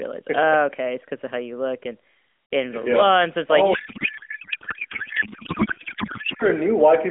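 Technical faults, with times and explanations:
3.74 to 6.45 s, codec payload misread: the speech over this narrowband mobile link gives way to garbled noise and warble that barely tracks it. This fits the receiver unpacking AMR frames as if they were packed differently, which points to octet-aligned data read as bandwidth-efficient, so every field lands in the wrong place. Unlike packet loss, there are no gaps or repeated fragments. The garble runs unbroken until the frames line up again.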